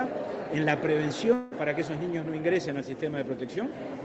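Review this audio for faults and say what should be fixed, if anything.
From 1.33 to 1.54 s the sound smears into a buzzy, fading continuation. That's the receiver papering over roughly 180 ms that never arrived, and it's likely a long network dropout. The missing stretch is just gone when playback resumes. A steadier network link, or turning on redundancy like Opus in-band FEC, would help keep it from happening.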